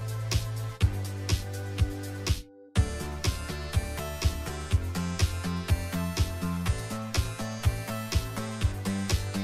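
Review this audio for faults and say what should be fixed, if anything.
One channel arrives around 10 ms later than the other, and the two are summed to mono, so the channel delay produces comb filtering throughout the clip. Content shared by both channels cancels at evenly spaced frequencies, with the first notch near 50 Hz and further notches roughly every 100 Hz above it. The result is a hollow, phasey colouring that never changes. To prevent it, time-align the channels before any mono fold-down.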